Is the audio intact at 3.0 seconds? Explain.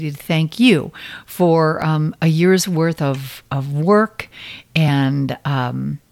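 No. The speech from 0.29 to 4.88 s has clock drift buffer slips, a regular click about every 1.53 s. The likely cause is two devices running on separate clocks roughly 0.1% apart, so a buffer periodically drops or repeats a block of around 70 samples.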